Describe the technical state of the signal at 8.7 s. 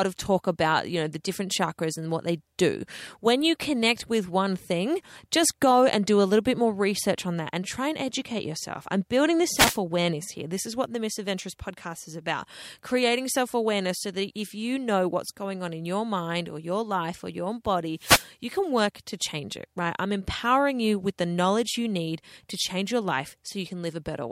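At 8.7 s the speech signal is intact, with no audible fault at that point.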